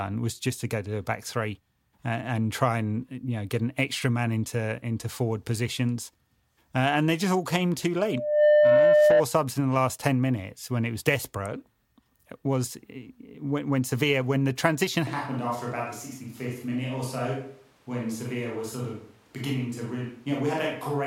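At 7.98 s a loudspeaker feedback squeal begins: the microphone is picking up the loudspeaker it feeds, and at 601 Hz the loop's gain tops one, so that frequency keeps reinforcing itself. In the recording a steady tone rises out of the speech over roughly half a second and settles at about 10 dB above it, a piercing whistle that holds until it stops at 9.23 s.

From 15.07 s to the end, the audio is most likely a switch to a distant microphone, with the close microphone's signal lost and a farther one, such as a camera's, taking over. The speech turns abruptly roomy and hollow with thinner bass. The level drops by about 5 dB, and room noise comes up to about 30 dB below the speech.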